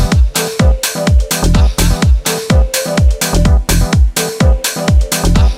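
Nothing goes wrong anywhere in the clip, so there are no technical faults to point out here.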